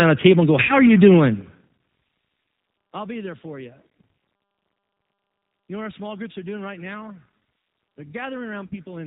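Throughout, the speech carries plainly audible G.729 codec damage. Nothing above 4 kHz passes. The voice sounds rough and synthetic at 8 kbit/s.

At 0.63 to 0.80 s and 8.66 to 8.77 s, VoIP packet loss concealed by the speech codec appears. Each gap loses 60 ms, which fits three packets. The decoder stretches the last sound into a fading buzz or coloured noise.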